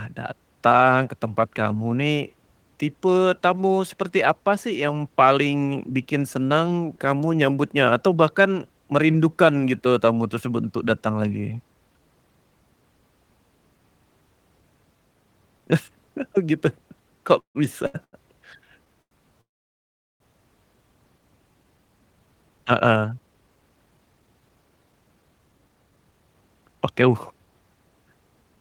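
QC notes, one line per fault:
17.39–17.57 s and 19.41–20.22 s, call audio freeze: the speech stops and the last sound is carried on, then fades to silence, about 0.16 s and then 0.79 s, most of it silent. It picks up right where it left off, so nothing's lost. That points to packets likely held up in transit, draining the jitter buffer.
17.87, 18.04 and 19.02 s, short stall from a late packet: three quick holds of about 72, 88 and 90 ms where a sound drags on with a faint buzzy dip while the receiver waits for a packet that turned up late. It resumes in the same place, nothing missing.
21.63–27.47 s, jitter buffer speed-up: after all that waiting the buffer's overfull, so the receiver keeps snipping out tiny pitch-period slices, roughly 0.7 s in total. The speech runs about 13% fast at the same pitch and sounds a bit rushed.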